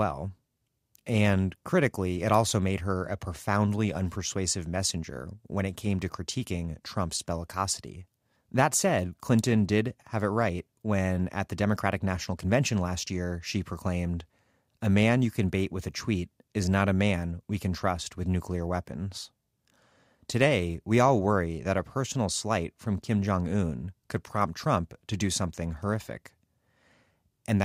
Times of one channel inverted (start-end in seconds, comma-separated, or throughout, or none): none